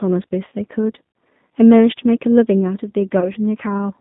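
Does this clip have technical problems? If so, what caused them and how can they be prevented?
Yes. The whole clip is G.729 coded speech at 8 kbit/s. Only the band from 150 Hz to 3.7 kHz survives. The codec rebuilds the voice from a vocal tract filter, a pitch predictor and a few pulses per frame. That leaves it rough and synthetic. A wideband codec such as G.722 or Opus would prevent this where bandwidth allows.

There is VoIP packet loss concealed by the speech codec at 0.48 to 0.51 s and at 3.20 to 3.32 s. The first gap covers 40 ms of lost audio, which fits two lost packets. The second covers 20 ms, which fits one. In both places the decoder stretches its last pitch and filter into a fading buzzy tone or coloured noise. Because each frame builds on the one before, the second event stays distorted until about 3.32 s. Prioritising voice traffic with QoS and adding forward error correction would reduce these losses.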